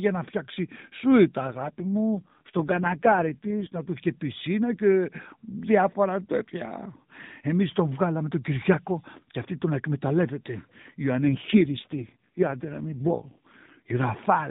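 From 1.46 to 3.78 s, just before "του είχε πισίνα και", and again from 11.2 to 14.0 s, there's an AMR rate drop: the band and flow hold, but the voice goes rougher and more synthetic, which fits a cut from 12.2 to 4.75 kbps.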